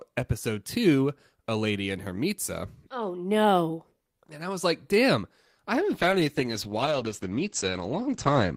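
A call bitrate drop hits this speech clip at 5.75 s, right after "was like damn I": the encoder's rate falls from 32 to 10 kbps until the end at 8.56 s, so the speech turns coarse and watery and the bandwidth narrows from 20 kHz to 8 kHz, dulling it.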